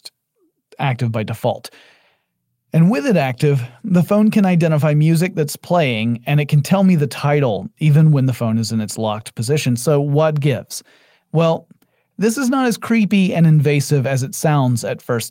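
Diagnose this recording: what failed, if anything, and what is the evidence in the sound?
Nothing failed: the sound of this speech recording carries no evidence of a fault at any stage of the chain.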